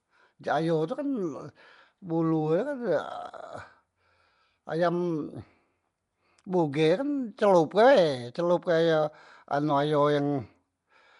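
Speech running throughout with a rough, hissy halo and a smeared, underwater quality, likely from Nellymoser compression, which fits the Flash microphone codec at around 44 kbps. A spectrogram would show nothing above 10.6 kHz and noise-filled, blocky patches where weaker bands were left unallocated.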